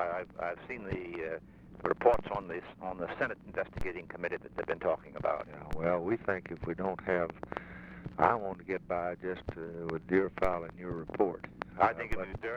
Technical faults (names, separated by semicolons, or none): DC step